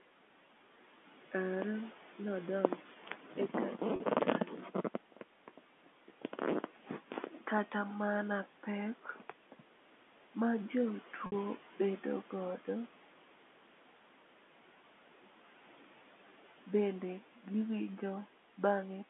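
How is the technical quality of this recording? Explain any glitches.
The recording has three kinds of fault: a noise suppressor that audibly pumps the background and at times eats into the speech, and two short packet losses. The narrowband, phone-like tone of the G.711 line and the room noise about 19 dB below the speech are heard beneath them.

Noise suppressor artifacts run through the whole clip. The suppressor pulls down whatever bands it judges to be steady noise, by about 12 dB, frame by frame. The background therefore dips between phrases and swells back under speech.

Speech cut by the noise suppressor happens at 2.86–3.35 s, 4.46–4.75 s, 6.64–6.90 s, 7.08–7.43 s and 9.04–9.32 s. In these spans the suppressor mistook quiet parts of the speech for noise and lowered them by about 8 to 11 dB. The deepest cuts come just before "kata mana pek", and the affected syllables and endings sound swallowed and faint.

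Packet loss with pitch repetition occurs at 3.96–4.00 s and 11.26–11.32 s, just before "bedo godo". Audio was lost for 40 ms and then 60 ms, which fits two and three 20 ms packets. The receiver filled each gap by repeating the last pitch cycle, so the sound briefly holds on a buzzy, sustained tone, fading out in the longer gap, before the speech resumes.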